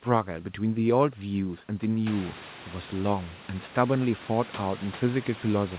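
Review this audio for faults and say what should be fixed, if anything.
Nothing here needs fixing: the room noise that comes up by about 18 dB around two seconds in still sits about 16 dB below the speech, and the lack of anything above 4 kHz is just what the G.711 call path does.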